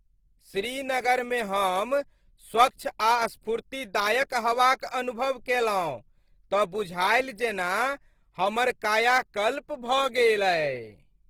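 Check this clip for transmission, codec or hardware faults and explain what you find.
One codec fault is present across the whole recording, from start to finish: Opus compression artefacts, plainly audible. The spectrum stays full width, with content reaching about 20.2 kHz, yet the speech sounds rough and grainy. That combination points to the encoder's CELT music mode running at a low rate, which fits roughly 16 kbps. Short of bits, it keeps each band's energy but refills detail with folded or noise-like content, so harmonics lose their clean structure. The likely cause is this Opus encoding.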